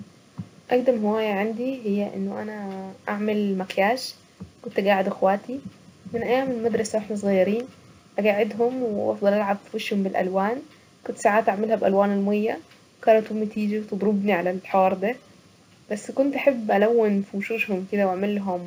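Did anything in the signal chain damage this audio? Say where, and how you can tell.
Yes. The damage is at the sample-rate conversion stage and runs through the whole clip. This is imaging from linear upsampling. The speech has dull top end and a faint metallic shimmer on sibilants, from mirrored energy between 8 kHz and 16 kHz, about 35 dB down. That fits a 16 kHz source raised to 48 kHz by straight-line interpolation.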